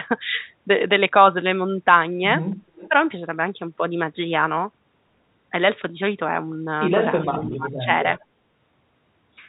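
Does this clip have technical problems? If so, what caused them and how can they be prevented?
Yes. An echo leak appears at 2.76–2.88 s, 7.22–7.57 s and 8.17–8.25 s. It is a faint copy of the far talker, delayed 375 ms and roughly 15 to 30 dB down. The likely cause is a loudspeaker whose echo canceller let some pickup through. Using a headset or a better-tuned echo canceller would prevent it.

Speech suppressed in double talk occurs at 2.89–2.94 s and 7.44–7.90 s, while both sides overlap. The talker dips by about 10 to 15 dB, likely because the canceller attenuated everything. A full-duplex-capable canceller, or a headset, avoids this.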